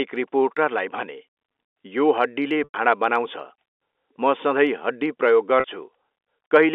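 Packet loss with pitch repetition at 2.64 to 2.74 s and 5.60 to 5.64 s: the receiver repeated the last pitch period. The 100 ms gap buzzes, then fades to silence. The 40 ms gap briefly holds.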